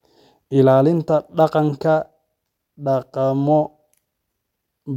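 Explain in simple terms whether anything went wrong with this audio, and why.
Nothing went wrong here; no faults can be heard.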